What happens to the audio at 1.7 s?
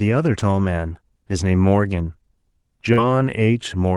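Nothing goes wrong at 1.7 s: the speech passes through intact, with only the ordinary character of the call path, which sounds like Opus at a moderate bitrate with its top end rolled off around 12 kHz.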